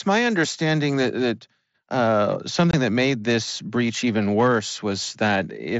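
At 2.71 to 2.74 s the sound drops out abruptly. This is unconcealed Bluetooth headset packet loss: a run of headset voice packets, about 22.5 ms, which fits three lost frames, never arrived and was replaced by silence or an idle pattern, leaving a short hole with abrupt edges.

From 4.39 to 4.57 s hard clipping sets in. The level was driven about 3 dB beyond what a stage could pass, so the peaks are sliced flat. The added high harmonics give a crackle on the loudest moments.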